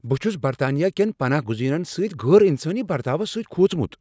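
Listening to the speech recording, nothing stood out as a technical problem.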